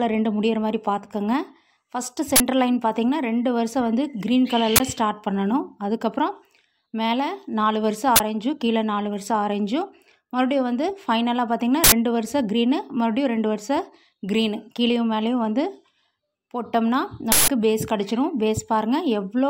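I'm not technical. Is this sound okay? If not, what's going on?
No, there are short harsh bursts of digital noise at 2.36, 4.76, 8.16, 11.84 and 17.32 s. That's an uninitialised buffer: the player grabbed a chunk of memory before any audio was written to it, so leftover junk got played. The last two bursts are longer, about 80 and 160 ms.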